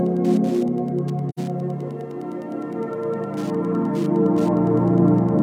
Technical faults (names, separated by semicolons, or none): Wi-Fi interference; AAC frame loss with muting